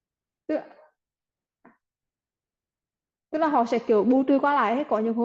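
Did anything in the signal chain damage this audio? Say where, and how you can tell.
No, nothing in the signal chain damaged this audio.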